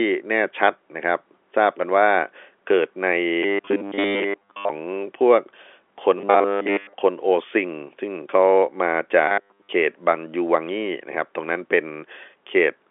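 At 3.43 to 4.69 s, 6.18 to 6.93 s and 9.28 to 9.70 s the speech turns into a rigid metallic buzz at 100 Hz, robotic sound from repeated short buffers. The likely cause is audio arriving too seldom, so a 10 ms slice is looped while most of the real signal is skipped. A spectrogram shows evenly spaced 100 Hz harmonic lines, and the waveform shows identical repeating cycles. All of it sits inside the telephone band, with nothing above about 3.7 kHz.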